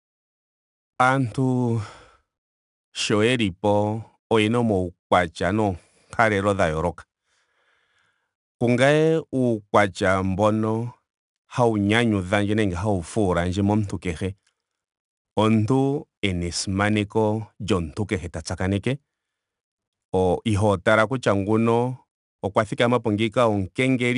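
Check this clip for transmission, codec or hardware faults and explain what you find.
One codec fault is present, throughout the clip. The speech carries a gritty hiss that rises and falls with its level, roughest on loud syllables, and nothing sounds above 10.6 kHz. This is 4-bit ADPCM compression. Each sample becomes a coarse step from a prediction, so the error tracks the signal. The band limit fits a rate near 89 kbps.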